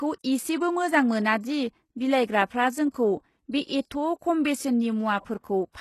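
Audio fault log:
Throughout: HE-AAC compression. Treble sounds gritty and lispy on s sounds, nothing above 12.3 kHz; likely rebuilt from copied lower bands, fitting a low bitrate around 16 kbps.
2.90 to 2.94 s, 3.52 s: pre-echo. Brief hiss before sharp attacks, first just after "मोजां मोना दि बिलाइग्राफ्रा"; block quantisation noise spills into the quiet moment ahead.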